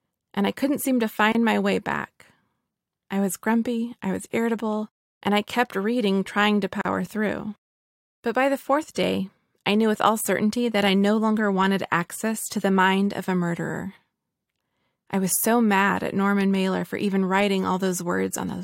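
Speech with two gaps at a join of encoded pieces: near silences of about 27 ms at 1.32 to 1.35 s, between "I couldn't seem to" and "my way back", and 39 ms at 6.81 to 6.85 s, after "kept reading trying to". Separately encoded segments were joined with their encoder delay and final-frame padding left in. Unlike a dropout, nothing is skipped, because the sound resumes exactly where it stopped.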